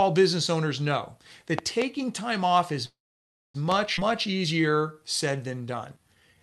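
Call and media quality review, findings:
Loud pop, 1.59–1.84 s: two sharp pops about 15 dB above the speech, which continues underneath. Likely an electrical transient from a plug, switch or driver glitch. Unlike a dropout, nothing is interrupted; the pulse is simply added on top.

Loud pop, 3.72 s: single pop, again about 15 dB over the signal, sound intact beneath. Same transient character as the pair at 1.6 s, not a codec artefact: brief impulse, no spectral smearing, no missing audio.

Call audio freeze, 2.85–3.56 s: 0.69 s stall, brief fading fill then about 0.59 s of silence. Likely the jitter buffer ran dry on delayed packets. Speech resumes exactly where it stopped, so nothing is lost and delay grows by 0.69 s. This sets it apart from a skip.

Skip ahead, 3.96 s: abrupt forward jump, roughly 0.3 s of speech gone, the two sides spliced with only a 12 ms fill. Audio dropped in transit or by an overflowing jitter buffer, cutting the delay by about 0.3 s. 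Opposite of the freeze: content lost, no gap.

Jitter buffer slow-down, 4.12–6.40 s: speech runs at 89% speed with pitch unchanged, drawn-out sounds, 264 ms added. Buffer repeating single pitch periods to rebuild reserve. Unlike a freeze, there is no silence, only sustained stretching.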